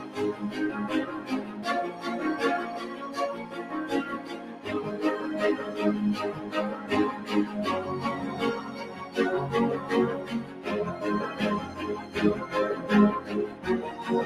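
A noise suppressor applied to music or sounds runs throughout, treating held and decaying sound as noise, so the level pumps by around 10 dB while attacks pass. Sound cut by the noise suppressor appears at 0.0–0.18, 1.19–1.59, 2.86–3.07, 3.38–3.73, 4.18–4.66, 8.61–9.16, 10.44–10.66 and 13.49–13.65 s, where steady passages sink by about 5 to 6 dB and tails end early.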